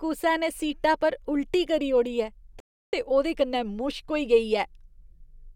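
At 2.60 s the speech halts in a rebuffering stall: playback ran dry of downloaded audio and waited about 0.33 s before continuing with "ते ओह्दे कन्नै" at 2.93 s. Unlike a dropout, nothing is skipped; the speech resumes exactly where it stopped, only later.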